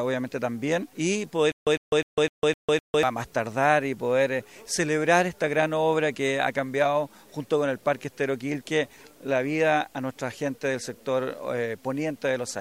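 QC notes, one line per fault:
1.52 to 3.03 s, stutter with silent gaps: a 103 ms burst repeats six times, each followed by about 152 ms of dead digital silence, so it pulses every 255 ms. Most likely the stream stalled and kept replaying its last fragment, and the audio from that stretch is gone.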